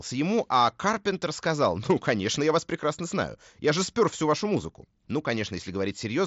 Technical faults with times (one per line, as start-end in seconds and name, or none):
none